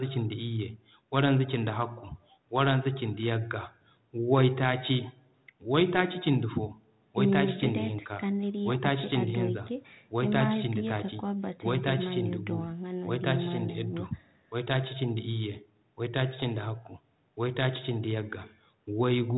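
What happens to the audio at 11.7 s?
Nothing goes wrong at 11.7 s: the speech continues intact, with only the narrowed telephone bandwidth of the call path and its 32 kbit/s G.726 ADPCM coding heard there.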